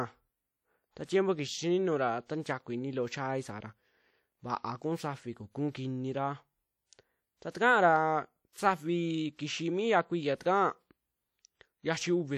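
A ringing, washy quality runs through the whole speech clip, with a hiss that swells and fades along with the talker. The coding damage is plainly audible and most likely comes from WMA compression. At a bitrate that sounds to be around 48 kbps, the encoder quantises each long transform block coarsely and drops weak spectral lines. The leftover noise smears across tens of milliseconds and gives the sound its watery edge.

Four times a short hiss creeps in just ahead of a sharp onset, and the attack itself lands blunted and smeared. This happens at 1.05 s (about 41 ms of lead-in), 2.42 s (33 ms, right before "ini loo chaai saara"), 7.50 s (42 ms) and 8.53 s (34 ms). This is pre-echo. Each attack falls late in a transform block, so noise sized for the loud onset also fills the quiet moment before it.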